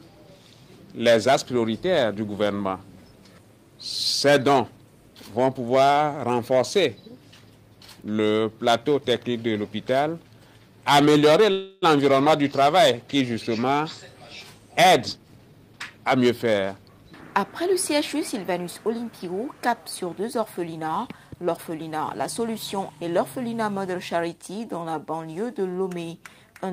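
At 11.51 s the audio stalls for about 0.31 s, until 11.84 s. The last sound carries on as a fading buzz or hiss. This is a call audio freeze, likely from delayed packets draining the jitter buffer. Nothing is lost. The audio resumes where it stopped, now running later.

From 15.16 to 16.54 s there is a jitter buffer speed-up. The receiver trims repeated pitch-period slices to shed excess delay, about 0.3 s in total. The audio plays at 122% speed with unchanged pitch. It sounds hurried.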